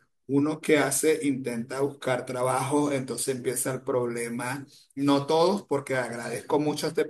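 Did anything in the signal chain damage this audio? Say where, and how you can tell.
No, nothing in the chain damaged it.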